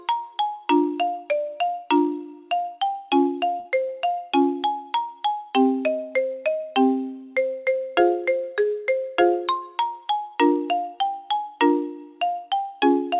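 At 3.60 to 3.67 s there is a burst of packet loss. The receiver stretches the last sound for 46 ms while fading it, then resumes with 40 ms missing. A spectrogram shows smeared, dimming bands ending in an abrupt jump, and the waveform shows a decaying stretch.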